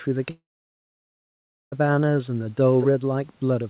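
It's a short speech clip. At 0.3 s the audio cuts out until 1.74 s, most likely a long network dropout: about 1.4 s of sound never arrives, the receiver smears the last bit into a brief fading buzz, then there's roughly 1.3 s of near-silence before the speech picks up again with that chunk simply gone. Then from 2.82 to 2.86 s there's a quick scrap of echo leak, a copy of the speech trailing by about 221 ms at roughly 10 dB under the main level, likely because a loudspeaker on the far end let some sound past its echo canceller. The band stops at 4 kHz throughout, which fits a G.711 mu-law call path.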